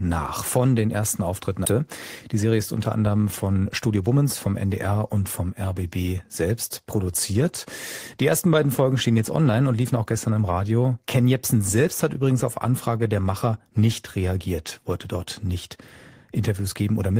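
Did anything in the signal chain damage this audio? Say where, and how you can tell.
Yes. At 1.65 to 1.67 s there is a skip ahead at the network and jitter-buffer stage. Playback jumps forward with no filler, and about a second of speech is missing. The two sides of the jump are spliced almost directly, which fits audio being dropped while later audio was already waiting.

Two jitter buffer speed-up passes follow, from 2.28 to 2.60 s just before "ist unter anderem" at 114% speed, and from 3.66 to 4.09 s just after it at 109%. Pitch holds while the pace hurries. The receiver trimmed pitch-period slices to drain an overfull buffer.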